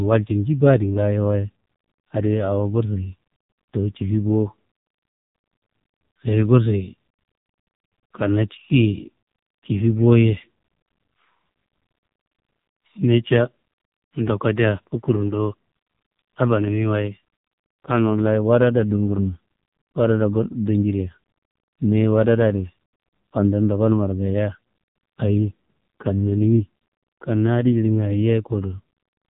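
From the first second to the last, this speech sits behind the AMR narrowband mobile codec, and it's pushed hard. Nothing above 4 kHz survives, so the sibilants go dull and the whole thing has that boxed-in phone sound. The voice gets rebuilt from a vocal-tract model and a few pulses every 5 ms, and with so few bits to work with, which fits the 5.9 kbps mode, it comes out buzzy and noticeably synthetic.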